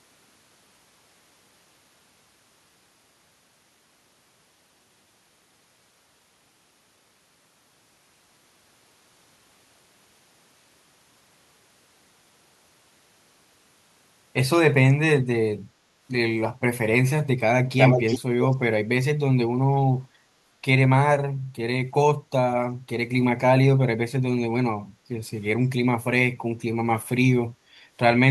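A speech recording with two technical problems. From 17.67 to 18.19 s and again from 18.41 to 18.56 s, a delayed copy of the speech trails the original by 372 ms. The first stretch is roughly as loud as the direct speech, and the second is somewhat quieter. This is likely an echo leak: the far end was on a loudspeaker, and its echo canceller let part of the returned audio through. From 24.88 to 25.08 s, the background is gated by the echo canceller. The room sound dips by about 8 dB for roughly a fifth of a second and then recovers. This happens when the canceller pulls the microphone down hard while the loudspeaker is active and releases it afterwards, so the ambience briefly drops out.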